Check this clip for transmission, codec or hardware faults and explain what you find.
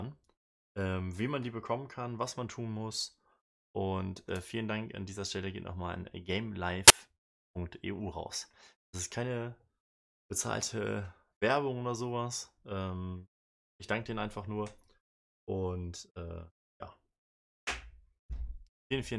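One fault stands out: file tags played as audio, from 6.88 to 6.90 s. For about 25 ms, a block of compressed data from an embedded cover picture is read as if it were samples. Because compressed bytes look random, they come out as very loud white noise: a sudden, harsh burst of static with hard edges. On a waveform it shows as a dense, loud block. On a spectrogram it is a bright vertical band spanning all frequencies, with abrupt start and end.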